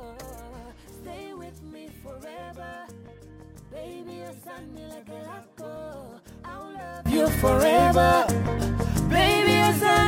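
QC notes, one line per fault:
0.0 to 7.06 s, one channel inverted: summed to mono, the audio falls by about 21 dB, most likely because one stereo channel has reversed polarity, so everything common to both sides cancels and only their difference survives. Unlike a plain gain drop or dropout, the loss is uneven: what the channels share vanishes, background included, and only a faint copy of their small mismatch remains. Full level returns at 7.06 s.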